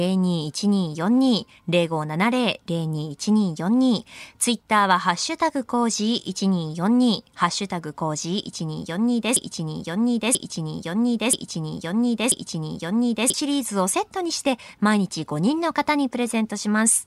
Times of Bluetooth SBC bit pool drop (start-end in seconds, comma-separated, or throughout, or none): none